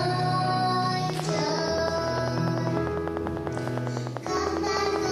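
From 1.10 s to 5.07 s a train of clicks ticks steadily over the sound, some forty alike pulses at about 10 per second, standing roughly 10 dB above it. Likely interference or a faulty connection or power supply. The waveform shows evenly spaced spikes; the spectrogram shows regular thin vertical lines.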